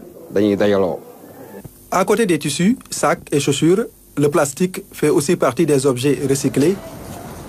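No technical faults can be heard anywhere in the clip, so there is nothing to describe in time order.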